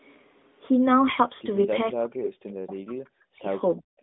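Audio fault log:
3.77 to 3.84 s, speech suppressed in double talk: The speech dips sharply for about 70 ms, falling by around 25 dB at its deepest before recovering. The cause is likely an echo canceller reacting to both ends talking at once. It could not tell the near talker from the loudspeaker echo, so it turned everything down. The sound here is already narrowband, with nothing above about 3.8 kHz from the mobile codec.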